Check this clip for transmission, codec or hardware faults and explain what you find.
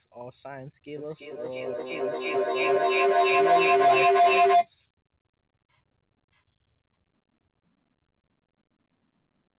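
There is one fault, a feedback howl, in audio that tops out at 4 kHz, consistent with a narrowband telephone codec. From 0.97 to 4.71 s, two devices in one room formed a microphone-to-loudspeaker loop that gained level each pass, building a tone near 700 Hz pulsing roughly every third of a second, peaking about 16 dB above the speech. A spectrogram shows a bright horizontal line; the waveform swells into a dense block.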